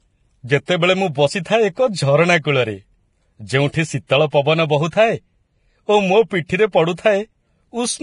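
Speech with heavy coding damage throughout: nothing is present above 10.5 kHz, and the remaining treble is hissy and grainy, with roughened tones and softened consonant onsets. The likely cause is Vorbis compression at a low bitrate, consistent with something near 29 kbps, where the coder drops the top band and quantises the upper residue so coarsely that fine detail turns into noise of similar energy. Pre-echo appears at 0.66–0.68 s, 1.42–1.45 s (just before "ଏକ ଝରଣା"), 3.72 s, 4.90–4.93 s, 6.46–6.50 s and 6.95–6.98 s, each a brief hiss of roughly 20 to 33 ms leading into a sharp attack. These attacks sit late in a transform block, so quantisation noise sized for the loud onset spreads back across the quiet moment before it, leaving the attack smeared.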